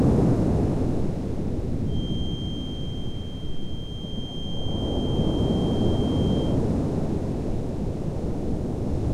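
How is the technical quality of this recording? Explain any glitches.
The recording has one clear fault. From 1.83 to 6.6 s, a feedback whistle at 3.2 kHz sits roughly 20 dB below the sound. It is likely a speaker-to-microphone loop held at the edge of feedback. A spectrogram shows it as a thin, steady horizontal line.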